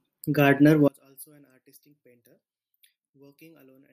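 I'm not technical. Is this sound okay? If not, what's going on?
No. From about 0.88 s to the end, the speech drops away sharply and almost disappears. What is left sounds faint. The likely cause is one channel inverted. One side of the stereo pair has its polarity flipped, so it pushes while the other pulls. When the two sides are combined into one, the parts they share cancel out. A centred voice is exactly that shared part, so it nearly vanishes.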